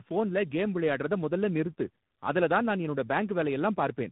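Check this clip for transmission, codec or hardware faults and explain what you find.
One fault runs through the whole clip: tandem speech coding. The signal has been through two lossy speech codecs in sequence, an AMR-NB stage at 7.4 kbit/s followed by G.726 at 32 kbit/s, with G.711 mu-law at 64 kbit/s between them. Each transcoding stage encodes the previous coder's artefacts as though they were part of the signal. The degradation compounds, giving rough, warbly speech, and nothing remains above 3.8 kHz, so the voice sounds muffled.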